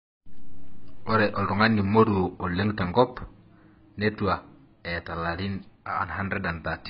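Throughout the speech, smeared, watery artefacts from more than one codec are heard together, pointing to transcoding between lossy codecs, likely a very low-bitrate AAC encode later re-encoded as MP3. A spectrogram shows a hard ceiling with nothing above 5.1 kHz.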